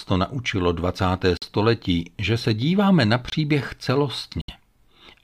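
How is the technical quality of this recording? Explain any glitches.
The recording has three short dropouts. Corrupt frame muted at 1.37 to 1.44 s, 3.30 to 3.34 s (just after "že se díváme na") and 4.41 to 4.50 s: damaged compressed frames were rejected by the decoder and replaced with silence. Each gap cuts in abruptly and lasts 66, 44 and 89 ms, which points to two, two and three lost frames. The speech simply vanishes for that instant and resumes on time, with no shift in timing.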